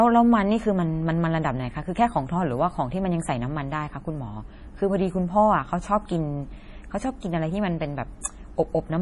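From start to finish the speech sounds watery and swirly, with metallic chirps on the s sounds and nothing above 11.4 kHz. This is heavy MP3 compression, likely at a very low bitrate such as 32 kbps, where the encoder drops the treble and zeroes weak frequency lines that flicker frame to frame.

From 8.21 to 8.25 s a short hiss runs for about 36 ms before a sharp attack, which lands softened and smeared. This pre-echo comes from the codec spreading quantisation noise, sized for the loud onset, across the quiet moment ahead of it.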